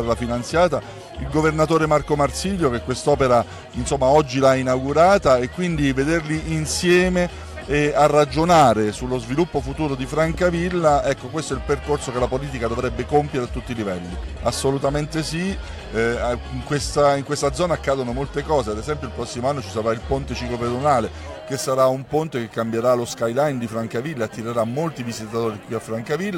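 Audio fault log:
21.53–26.37 s: sample clock jitter. From here to the end, the converter's clock wanders by roughly 7 microseconds. Each sample lands slightly early or late. The error scales with waveform slope, so a hiss and roughness ride on louder, brighter sound, about 30 dB down.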